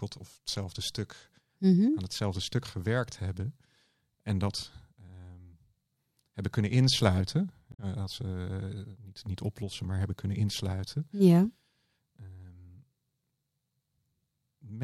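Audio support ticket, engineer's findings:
Damaged data in compressed stream, 7.69–7.80 s, right after "hebben kunnen insluiten". Short glitch, about 0.1 s. Corrupt bytes in the encoded stream; decoder misreads frames there, loses sync, resumes at next valid frame header. Probable component: transport or file storage upstream of decoder.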